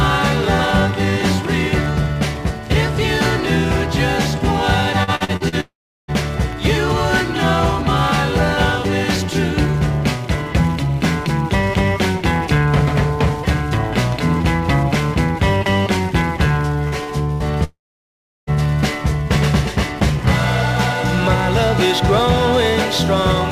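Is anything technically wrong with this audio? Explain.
Yes. The audio suffers from network packet loss in two clusters, around 5 s and around 17 s.

From 5.03 to 5.55 s there is repeated packet loss with a robotic sound. Five gaps, the longest 48 ms, were each patched by continuing the previous sound, so about 40 percent of that half-second is synthetic. It sounds choppy, with fragments missing. On a spectrogram it appears as short, smeared, repeated blocks interrupting the normal texture, and the waveform shows stuttering, repetitive segments.

A long network dropout is the likely cause of what follows from 5.60 to 6.11 s and again from 17.64 to 18.50 s. In each case the last sound is carried on as a fading buzz or hiss and then gives way to silence, about 370 ms in the first and 720 ms in the second. The audio resumes without the lost portion. The waveform shows a decaying tail collapsing to a flat line, and the spectrogram shows a smeared band thinning into an empty region.

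Short concealed packet loss occurs twice, at 16.88 and 17.04 s, each filling a 40 ms hole by extrapolating the preceding sound before blending back. Each is heard as a brief smear or wobble. A spectrogram shows a narrow vertical strip where fine detail blurs into stretched, repeated harmonics or noise, while the waveform looks briefly too regular.

A burst of packet loss at 17.32 to 17.43 s removes about 80 ms. The receiver held the last sound and faded it down, giving a short held buzz or dying hiss before the audio picks up further on. On a spectrogram this appears as frozen, horizontally stretched energy that dims, and the waveform shows a decaying repetitive envelope followed by an abrupt resumption.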